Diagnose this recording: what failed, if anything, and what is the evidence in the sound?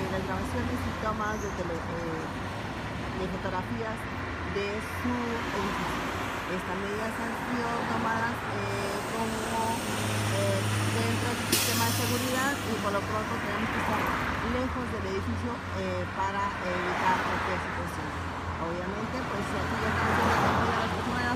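Nothing failed; no fault can be heard.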